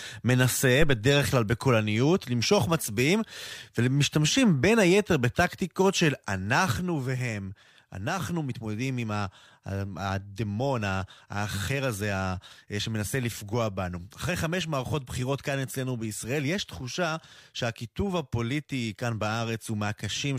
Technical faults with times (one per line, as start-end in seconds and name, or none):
6.72-20.39 sudden gain jump